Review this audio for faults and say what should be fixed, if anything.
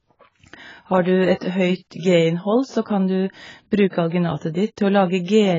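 Heavy AAC compression damage runs throughout the speech: nothing above 7.5 kHz, with a dull, smeared, fizzy texture, likely from AAC-LC quantisation at a rate fitting about 16 kbps. Encode at a higher bitrate or deliver uncompressed audio.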